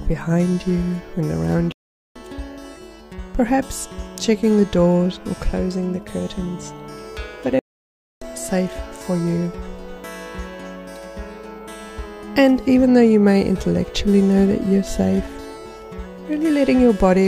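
At 1.72 s the sound stops dead and stays silent for about 0.43 s, resuming at 2.16 s. A second break follows at 7.59 s, lasting about 0.62 s until 8.22 s. Both are playback stalls. The output simply goes quiet in mid-flow. The likely cause is the player running out of buffered data, or its thread being blocked, so nothing reached the output until it recovered.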